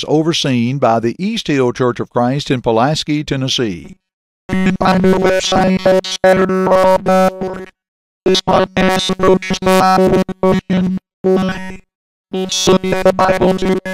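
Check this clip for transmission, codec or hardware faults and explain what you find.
One fault: from 3.85 s to the end at 13.94 s, speech becomes a rigid metallic buzz near 188 Hz: robotic sound from repeated short buffers, likely from looping roughly 5.3 ms chunks nonstop.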